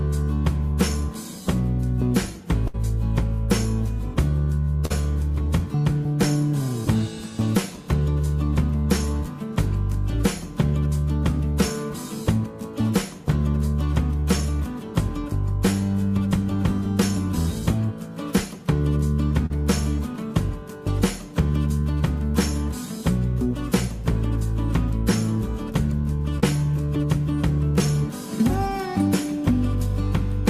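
At 2.67 to 2.76 s and again at 4.86 to 4.92 s, a burst of packet loss means audio arrived too late or not at all. The receiver extends the last sound for about 61 ms and 46 ms as a fading held buzz or hiss, and the audio resumes with roughly 60 ms and 40 ms skipped. At 19.46 to 19.52 s and 26.40 to 26.44 s, short concealed packet loss is patched by continuing the preceding sound for 36 ms and 23 ms, heard as a brief smear or wobble, with about 40 ms and 20 ms gone.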